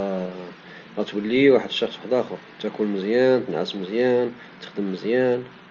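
No technical faults are audible.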